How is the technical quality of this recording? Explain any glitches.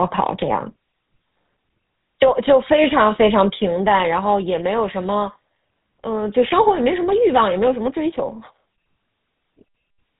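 The quality is clearly reduced by heavy narrowband speech-codec processing across the whole clip.

The GSM full-rate codec affects the recording from start to finish, and its plainly audible damage fits a 13 kbps GSM full-rate stream. The coder models the vocal tract as a filter and excites it with a sparse, regularly spaced pulse train that keeps only every third excitation sample. That coarse excitation makes the speech sound buzzy and gravelly. Nothing passes above 3.8 kHz, so the sound is muffled and telephone-like. A spectrogram shows a hard ceiling at 3.8 kHz with empty space above it and grainy, smeared harmonics below.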